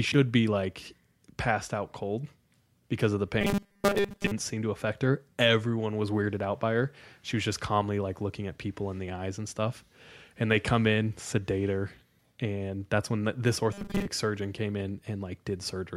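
At 3.41 s, after "cold because of the", the speech collapses into robotic sound from repeated short buffers until 4.31 s, resuming at "seem to affect her". It recurs from 13.73 to 14.07 s, between "that's when this" and "surgeon came". Each time a rigid metallic buzz at 200 Hz rides the words, which fits a 5 ms segment being looped for most of the stretch, likely because new audio arrived too slowly and was skipped.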